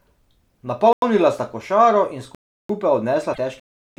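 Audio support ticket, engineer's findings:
Block of digital silence, 0.93 s, 2.35 s and 3.60 s: hard cuts to zero. First hole about 93 ms, just before "sta košaro in", which fits a 4096-sample buffer. Second about 346 ms, just after "sta košaro in". Third about 372 ms, which fits a 16384-sample block. Likely output buffer not filled in time; the gaps were zero-filled.

Damaged data in a compressed stream, 3.30 to 3.38 s: short glitch. Corrupt frames in the encoded stream; the decoder misread them, lost sync and resynced at the next frame header.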